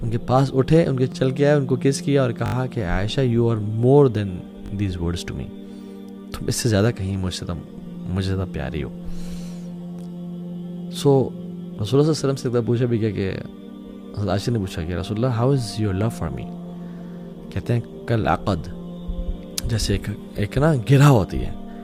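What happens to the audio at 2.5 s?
A repeated buffer occurs from 2.46 to 2.54 s. New audio arrived late, so the same short piece played four extra times, each with a hard join. The 20 ms repeats give a quick stutter or brief buzz. Nothing appears to be lost.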